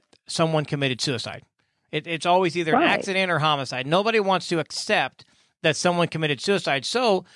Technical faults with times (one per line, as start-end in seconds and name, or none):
none